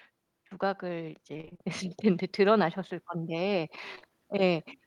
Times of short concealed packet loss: 3.95-4.11

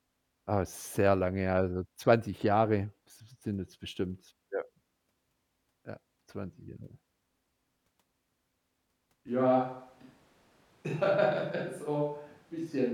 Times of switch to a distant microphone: 9.28-12.93

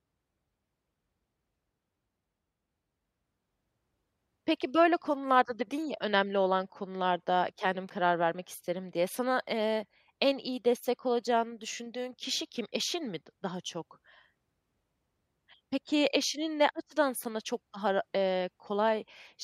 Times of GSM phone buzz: none

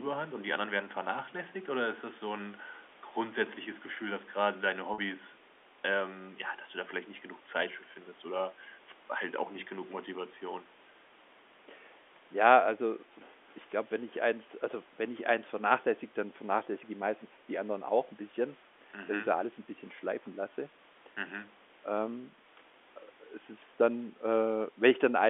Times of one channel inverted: none

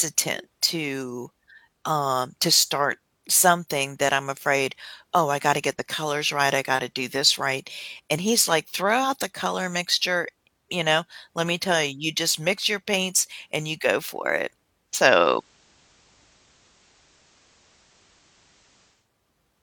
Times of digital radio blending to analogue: 14.85-19.10

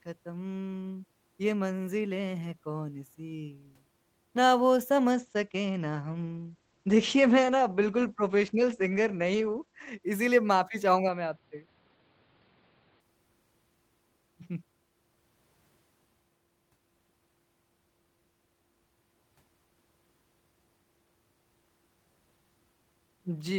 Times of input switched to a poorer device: 11.09-13.00

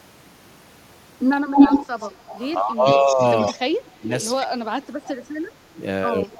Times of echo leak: 1.55-2.49, 2.99-4.25

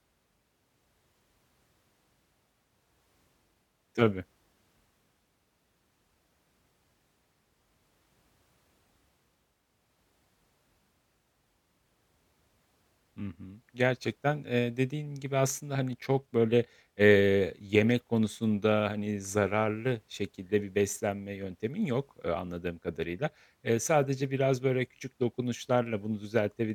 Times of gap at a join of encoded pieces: none

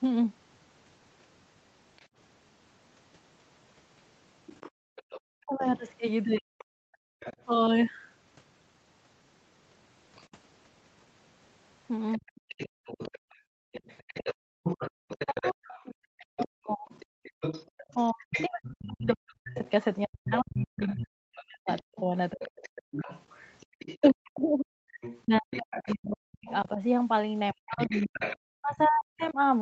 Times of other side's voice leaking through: 1.97-29.32

